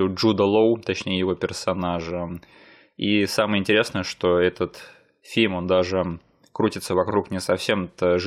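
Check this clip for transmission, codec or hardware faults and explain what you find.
One fault is present, a short stutter from repeated frames. At 7.09 to 7.14 s, just after "фильм он даже крутится", a 46.4 ms block of compressed data plays a second time, which fits two frames being sent twice. The decoder replays that slice, giving a brief stutter and lengthening the audio by 46.4 ms.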